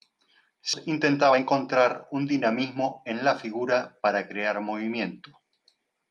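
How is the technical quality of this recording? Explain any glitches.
The recording has a couple of timing glitches typical of a call's receive side: one abrupt jump and two stretches of rushed delivery.

At 0.73 s there's a skip ahead. Something like 0.7 s of speech simply never gets played. It was either lost in transit or thrown out when the jitter buffer overflowed while later audio was already queued. There's no fill at all, so the two sides butt straight together and the speech lurches forward mid-flow, with a chunk clearly missing.

Right after that, from 0.87 to 2.31 s, you get a jitter buffer speed-up at 111%. The buffer was holding more audio than it wanted, so the receiver kept snipping out tiny pitch-period-sized slices, roughly 150 ms in total, to catch up. Pitch stays put but the talking sounds hurried. A milder second pass runs from 2.76 to 4.10 s at 106%, trimming something like 70 ms, so that stretch just feels slightly pushed along.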